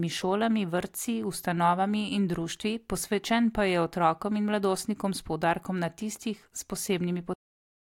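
A cut-off end arrives at 7.34 s: the speech stops mid-sound and drops straight into digital silence with no natural decay. The final stretch of audio was never written out or played, so the last buffers are simply missing and the utterance ends abruptly.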